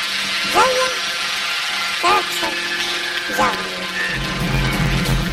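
From start to finish the audio carries a robotic, buzzy texture, a coarse rasp pulsing at about 86 Hz with no clear shift up an octave. This is planar audio read as interleaved. Each short block, around 11.6 ms long and consistent with 512 samples, stores all of one channel and then all of the other. Reading it as alternating pairs plays each block twice at double speed, left half then right half, and that rapid switching produces the buzz.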